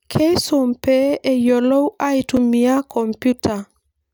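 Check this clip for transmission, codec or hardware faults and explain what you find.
One fault turns up, a single block of digital silence in the speech at 2.37 s. The output drops out for about 5.3 ms, which fits a 256-sample buffer not filled in time, then resumes with no fade. Both hard edges merge into one sharp tick. Unlike a lone click, a true gap sits between the edges.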